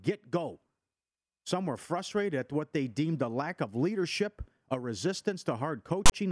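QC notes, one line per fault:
6.06 to 6.12 s, file tags played as audio: near the end of the speech a harsh, loud rasp cuts in with hard edges, leaning to one side and then dropping to dead silence, about 60 ms in all. A block of metadata was decoded as sample data. Its text bytes form a lopsided, buzzy waveform offset from zero, and the zero padding that follows reads as digital silence, which gives the static burst and abrupt gap.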